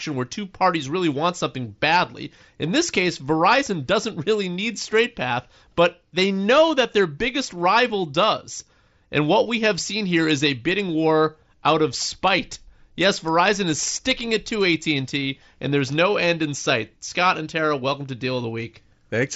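Speech with no technical faults. The audio tops out around 8 kHz with a faint graininess on louder passages, which fits a Bluetooth headset link using the wideband mSBC codec.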